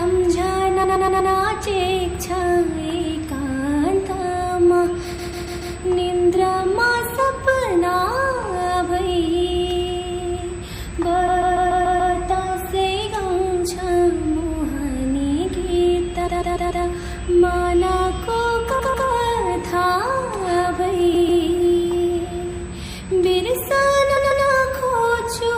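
A USB whine is present throughout: current drawn in the bus's 125-microsecond microframes leaks in through power or ground, leaving a fixed 8 kHz tone about 25 dB below the signal. Running alongside it, the audio sounds watery and swirly, with smeared attacks and metallic chirps on bright sounds, the plainly audible damage of MP3 compression, likely at a low bitrate around 64 kbps where the encoder starves the treble and lets weak components flicker. Repeated frames occur at 0.83–1.31, 5.17–5.75, 11.27–12.13, 16.26–16.84, 18.78–19.07, 21.13–21.42 and 24.16–24.45 s. Runs of compressed frames were played again, so a short block, 120 ms in the first case and 144 ms in the others, which fits five or six frames, stutters two to six extra times.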